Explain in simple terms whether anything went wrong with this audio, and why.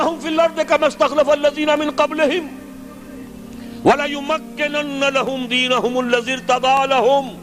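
Periodic USB or driver dropouts: every half second the audio connection briefly stalled, leaving tiny silent gaps heard as regular ticks from 0.27 to 7.27 s.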